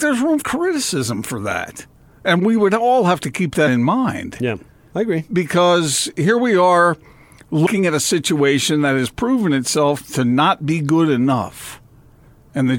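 Speech with compressed frames skipped at 0.40 to 0.43 s and at 7.66 s, where roughly 150 ms and then about 100 ms of audio vanish. At each join the audio jumps ahead by the length of the missing frames rather than leaving a silent gap.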